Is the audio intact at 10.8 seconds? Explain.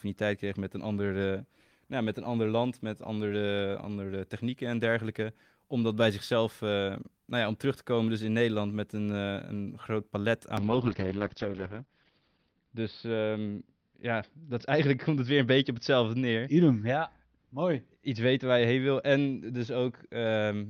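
No. A call bitrate drop begins at 10.59 s, just after "groot palet", and lasts to the end. The encoder's rate falls from 32 kbps to 7 kbps, holding its lowest for 2.1 s, and audio bandwidth shrinks from 20 kHz to 6 kHz, so the speech sounds coarse and muffled.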